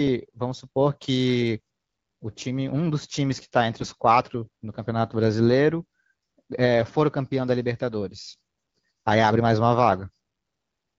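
From 3.80 to 3.89 s the speech turns briefly hoarse and gargly, a scratchy burst that keeps roughly its pitch and level. These are AMR bit errors: flipped low-priority bits, several percent of them, across what fits about four 20 ms frames, misplaced excitation pulses and skewed fine pitch, gain and spectral values.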